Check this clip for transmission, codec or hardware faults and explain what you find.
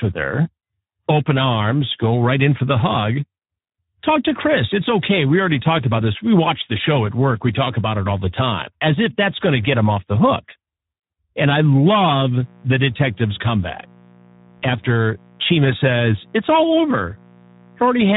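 Two faults show up: the speech runs through a Speex codec the whole way, and a mains buzz joins it partway through and stays to the end.

The Speex codec damage is there from start to finish, and it's plainly audible. Speex is a CELP coder: it models the vocal tract and spends a small bit budget describing the excitation that drives it. When that budget is tight, the excitation comes out coarse and the speech goes hoarse and noisy. The grittiness here fits a setting around 11 kbps. There's also nothing above 3.8 kHz, so the top end sounds dull and boxy.

The mains buzz comes in at 11.92 s and runs to the end of the clip. It's a steady, raspy buzz sitting about 30 dB below the speech. The mechanism is sharp switching spikes from something like a dimmer, a rectifier or an unshielded run leaking into the signal twice per mains cycle. Here the mains is 60 Hz, so you get a dense stack of 60 Hz harmonics climbing well up the spectrum, and that's what gives it the rasp rather than a smooth hum.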